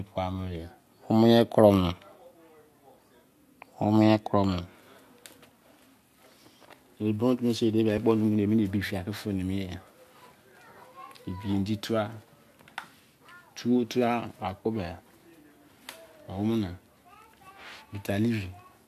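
At 7.97 s the speech is broken by a brief glitch. This is damaged data in a compressed stream. A short run of the encoded bytes was wrong at that point. The decoder could not read the frame cleanly and lost its sync. It then searched forward for the next valid frame header and resumed from there. The fault lasts under 20 ms, so it is heard as a very short disturbance in the speech.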